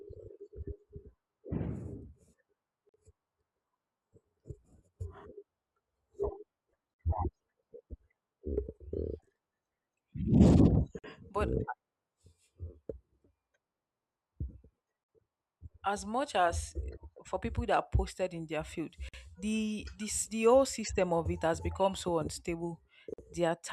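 At 2.89, 6.94, 10.99, 15.04, 19.09 and 23.14 s the speech drops into a gap at a join of encoded pieces, each silence about 49 ms (47 ms for the first), arriving every 4.0 s. The one at 19.09 s falls between "posted in their field" and "the this the whole". Each piece was encoded separately and joined untrimmed, so encoder start delay and last-frame padding leave silence. Unlike a packet dropout, the spacing and length are fixed and nothing is lost; the speech resumes where it stopped.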